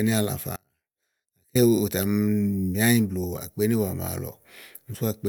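At 0.56 s the speech drops out abruptly and stays gone until 1.55 s, close to a full second. The gap holds only a faint residue of the signal, roughly 35 dB down. This audio dropout to a faint residue likely comes from a momentary signal loss upstream while the downstream path stayed live.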